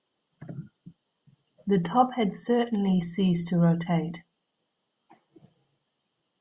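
No technical faults are audible.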